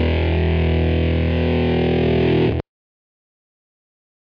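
No technical faults are audible.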